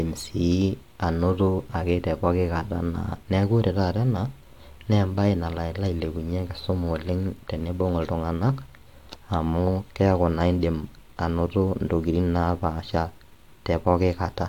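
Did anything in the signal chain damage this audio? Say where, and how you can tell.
No, nothing in the chain from capture to playback has left an audible mark on this speech recording.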